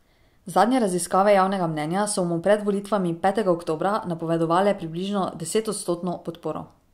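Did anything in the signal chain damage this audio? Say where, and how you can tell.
No, no damage is audible.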